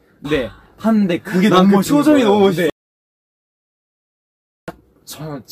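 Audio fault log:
2.70–4.68 s, audio dropout to silence: the sound cuts off abruptly and returns just as suddenly nearly two seconds later, leaving a gap of about 1.98 s that is silent with no room tone or background underneath. That silent gap means the input itself was lost while recording carried on writing silence, likely from a disconnected device, a broken link or an accidental mute. Whatever occurred during the gap is unrecoverable.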